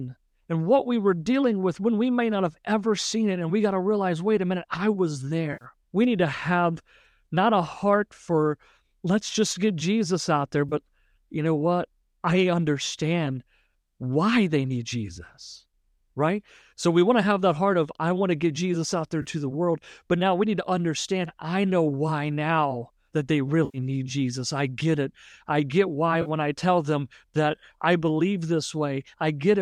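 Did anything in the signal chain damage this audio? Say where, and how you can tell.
Yes, there's AAC frame loss with concealment at the network and codec stage. You get brief smeared, noisy, phasey patches at 5.53–5.65 s, 10.69–10.74 s, 19.22–19.26 s, 23.65–23.78 s and 26.22–26.29 s. The dropouts run about 80, 30, 30, 90 and 40 ms, which fits runs of 10 ms frames going missing. That frame size likely points to AAC-ELD low-delay coding, which is working normally here. The decoder patches each gap by reusing the last good spectrum with jumbled phase, so you hear a smudge rather than a hard gap.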